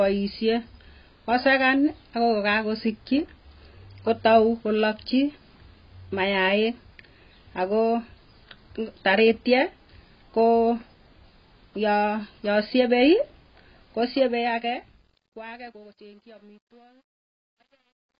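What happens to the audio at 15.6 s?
At 15.6 s the speech is sinking into the fade-out and has turned gritty. This is truncation distortion on a fade, running from 13.96 s to the end at 18.19 s and at its worst from 15.28 s onward. The fade, which starts around 14 s and ends at 18.2 s, is computed with too few bits, around 11, and no dither. As the level drops toward the smallest step, the waveform collapses into a few coarse square steps.

Under that, the sound is dull and smeared, with a fizzy, warbling texture and nothing above 5 kHz. This is heavy AAC compression, present through the whole clip. It likely comes from AAC-LC at a very low rate, fitting a 16 kbps stream, where the encoder lowers its cut-off and thins or noise-fills the bands it cannot afford.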